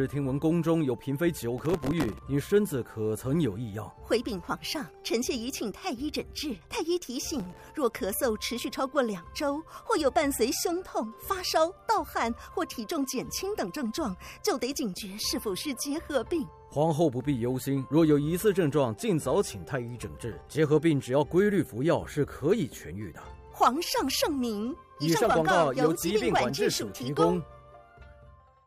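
A gritty, tearing crackle rides on the sound from 1.58 to 2.19 s and again from 7.40 to 7.70 s. This is processor overload crackle: dozens of very short buffers, around a millisecond and a half each, miss their deadlines and replay stale audio with hard edges.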